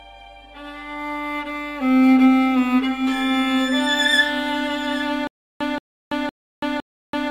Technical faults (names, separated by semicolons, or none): stutter with silent gaps